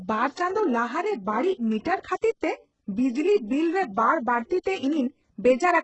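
Throughout, heavy HE-AAC compression damage, likely at a very low bitrate near 8 kbps. Copied lower bands form mismatched treble, making s sounds gritty, and the spectrogram is empty above 8 kHz.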